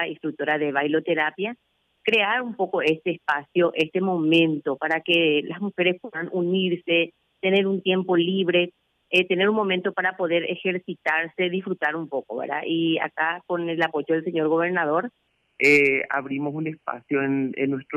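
At 15.27 s the sound drops into a section at the wrong speed, running to the end at 17.96 s. It plays at 0.87 times its proper rate. Pitch falls together with speed, about two semitones lower, so everything turns deep and sluggish. A playback clock mismatch is the likely cause.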